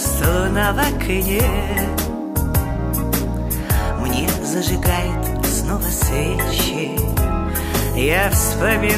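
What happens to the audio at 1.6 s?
At 1.6 s the audio carries on cleanly, with no dropout, click, distortion or other fault at that point.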